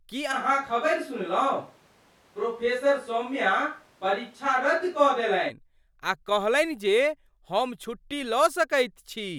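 A switch to a distant microphone runs from 0.34 s to 5.48 s. The speech turns abruptly roomy and hollow with thinner bass, at much the same level, with faint background noise well below the speech, and snaps back just as suddenly. The close microphone's feed likely dropped out.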